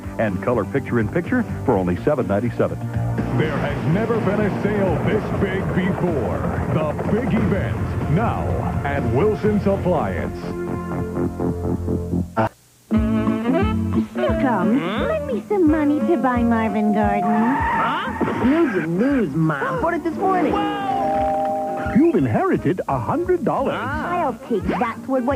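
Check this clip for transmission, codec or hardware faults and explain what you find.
One fault shows up: a loudspeaker feedback squeal from 16.05 to 17.82 s. A microphone was picking up the loudspeaker it was feeding, and at 707 Hz the loop gain rose above one, so that frequency kept amplifying itself. It is heard as a single tone that swells over about a second until it is roughly as loud as the rest of the sound, then the squeal stops at 17.82 s.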